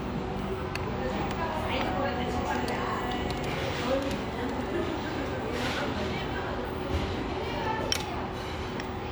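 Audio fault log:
No audible faults detected.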